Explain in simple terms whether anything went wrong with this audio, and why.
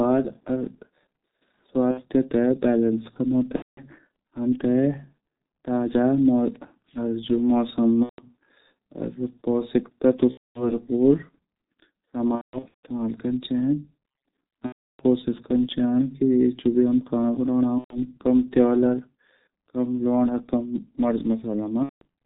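G.723.1 codec, throughout: this early internet-phone codec squeezes the speech hard and cuts everything above 4 kHz, so voices sound muffled and hoarse and consonants blur.

VoIP packet loss concealed by the speech codec, at 1.91, 3.56, 8.03, 10.31, 12.35, 14.66, 17.78 and 21.83 s: chunks of sound went missing, and the decoder filled each gap by guessing from what came just before. That guess comes out as a fading buzzy or noisy smear, and the speech stays weak for a short while afterwards.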